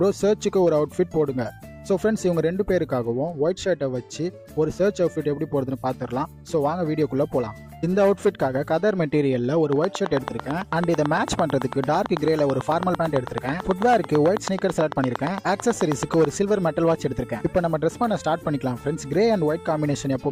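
Something in the chain, likely interference from nearby equipment or a faulty connection or power supply, starts injecting a train of clicks at 9.73 s and keeps it up until 16.26 s. The pulses arrive at a steady rate of about 9 per second, some seventy in all, each much the same in shape. They sit roughly 15 dB above the surrounding audio, so they come through as a sharp, regular ticking laid over the sound and carrying straight through the quieter gaps.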